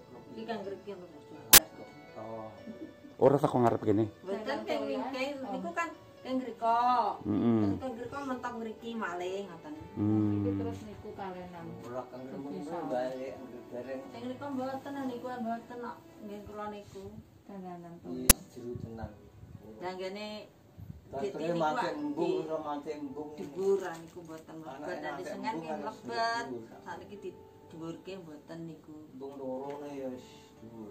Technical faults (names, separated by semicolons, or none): uninitialised buffer